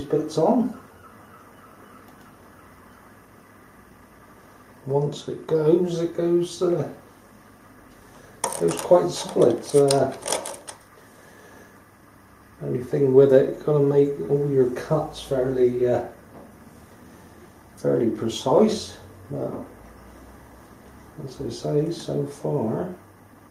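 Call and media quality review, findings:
Nothing to flag on this one: listened through and heard no faults from the capture or transport side, so no action needed.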